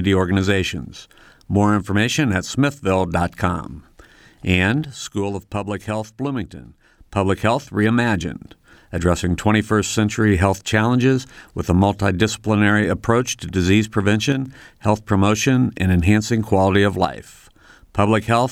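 The speech drops abruptly by about 6 dB from 4.85 to 6.98 s, again from 14.32 to 14.46 s after "multidisciplinary approach to disease", and from 17.05 to 17.26 s after "and enhancing quality of". This is likely one channel dropping out, halving the mono sum.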